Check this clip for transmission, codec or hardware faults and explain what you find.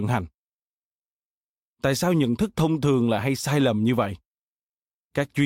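Nothing stood out on listening to the speech here; no transmission, codec or hardware problem could be heard.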